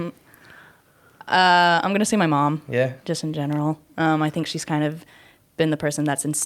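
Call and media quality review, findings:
No technical faults found in the speech signal: level, continuity and timing hold steady throughout, with nothing in the transmission or playback chain needing a ticket entry.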